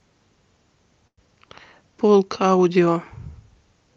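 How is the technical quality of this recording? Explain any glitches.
The recording carries one glitch, a call audio freeze from 1.07 to 1.19 s. The sound stops advancing and is stretched into a fading buzz, with about 60 ms of near-silence, likely because packets stalled and the jitter buffer ran empty. Unlike packet loss, nothing is missing: the speech resumes exactly where it halted, arriving about 0.1 s later. The call path's Opus coding limits the top end to about 8 kHz.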